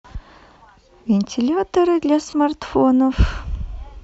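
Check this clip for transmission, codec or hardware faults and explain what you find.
Two brief patches of lost LE Audio frames break the speech, at 0.59 s and from 2.30 to 2.33 s. The decoder replaced the missing audio by reusing the last spectrum with random signs, which fits one lost 10 ms frame and then three. The gaps sound like a short noisy smear rather than silence or a sharp click, which separates them from a plain dropout. The link is likely Bluetooth LC3 at 64 kbps, with light compression.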